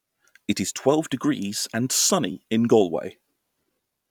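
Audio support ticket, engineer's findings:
No fault found in the speech clip. Nothing to trace to capture, transport or playback.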